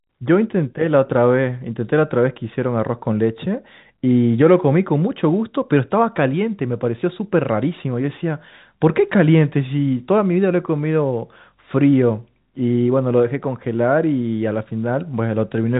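The clip is speech, and nothing in it is technically wrong.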